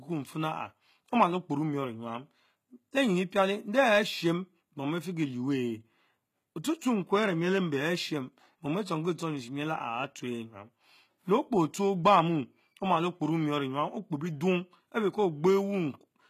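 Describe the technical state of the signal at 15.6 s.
At 15.6 s the speech carries HE-AAC compression, present throughout: gritty, lispy sibilance from treble copied up from lower bands, nothing above 14.9 kHz, likely a low bitrate around 20 kbps.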